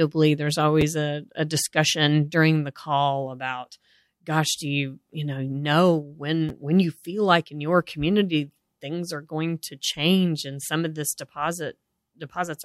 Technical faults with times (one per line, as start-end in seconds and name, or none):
0.81 chunks out of order
6.49 chunks out of order